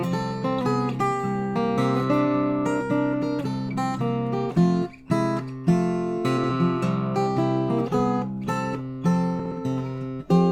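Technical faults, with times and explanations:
6.37–6.50 s and 9.39–9.52 s: frames out of order. Two neighbouring blocks of about 60 ms each, which fits runs of three frames, arrived swapped and were decoded that way. Each stretch plays with its halves exchanged, giving a brief garbled flutter, and no time lost.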